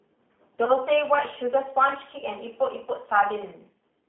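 Throughout, the speech has been squeezed through the G.729 codec, whose coarse pitch and pulse model points to an 8 kbit/s stream. The line passes only 250 Hz to 3.4 kHz, so the sound is thin and muffled, with a plainly rough, synthetic edge.

From 0.65 to 0.71 s, VoIP packet loss concealed by the speech codec: about 20 ms of audio went missing, and the decoder guessed it from its last pitch and filter. The sound briefly smears into a fading buzz or coloured noise and stays weak until about 0.71 s.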